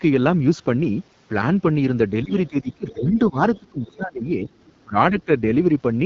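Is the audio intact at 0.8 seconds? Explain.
No. At 0.8 s, as across the whole clip, the speech carries AMR wideband (HD Voice) codec damage. The codec models the voice with a pulse-driven vocal tract filter, and the plainly rough, raspy quality points to one of its lowest rates, around 8.85 kbit/s. Nothing is heard above 7.4 kHz.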